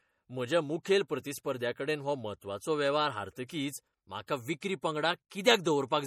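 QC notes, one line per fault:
throughout MP3 compression: the speech sounds watery and swirly, with metallic chirps on s sounds and nothing above 17.4 kHz. The likely cause is a low-bitrate MP3 encode, consistent with about 48 kbps, that zeroes weak frequency lines from frame to frame.
4.27 s pre-echo: a brief hiss lasting 17 ms comes just ahead of a sharp attack, which sounds soft and smeared. The codec spreads its quantisation noise over the whole block, so noise sized for the loud onset leaks into the quiet moment before it.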